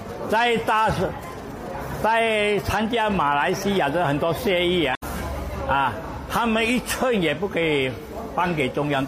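At 4.93 s the audio breaks up for about 0.1 s, until 5.03 s. This is damaged data in a compressed stream. A short run of the encoded data is wrong at that point. The decoder cannot read those frames correctly. It loses its place and has to search for the next valid frame header before normal decoding resumes. The result is a brief glitch in place of the expected audio.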